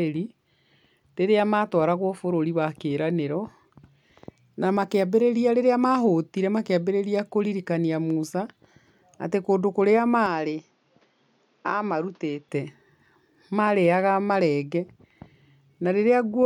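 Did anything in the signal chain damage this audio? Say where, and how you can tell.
Yes. At the device stage, the input likely switched to a poorer device from 10.26 to 12.49 s: speech goes dull with nothing above 7 kHz, drops a few dB, and gains faint new noise, with no gap.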